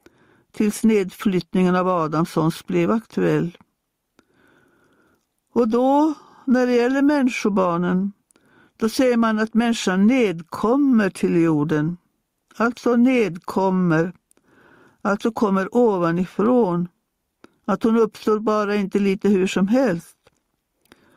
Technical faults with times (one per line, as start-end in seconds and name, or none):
0.00-21.16 gain pumping